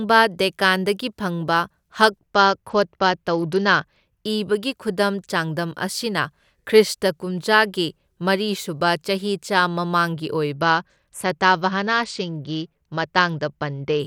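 From 2.19 to 4.26 s, and again from 10.54 to 13.99 s, the speech turns dull and loses its treble while a gritty, grainy noise rises under it, then clears. This is a Bluetooth SBC bit pool drop. A congested link forced the encoder to spend far fewer bits, which fits a fall from a bit pool of 28 to 9, near 78 kbps. The upper sub-bands get almost nothing, and the rest are coarsely quantised.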